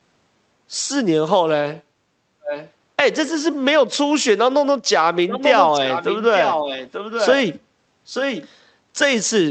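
Around 2.44 to 2.71 s you get a faint delayed copy of the speech, roughly 0.89 s behind and about 10 dB down. That's an echo leak, likely from the far end's loudspeaker feeding its mic past an echo canceller that didn't fully clear it. It returns louder, only about 5 dB under the speech, from 5.29 to 6.17 s, 6.35 to 7.35 s and 8.05 to 8.49 s, sounding like a trailing double.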